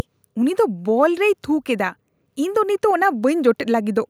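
A DC offset runs through the whole speech recording, shifting the waveform off zero by a constant amount. Unlike hum or rumble, it adds no audible tone. It shows only as steady energy at 0 Hz and lost headroom, so one polarity clips sooner.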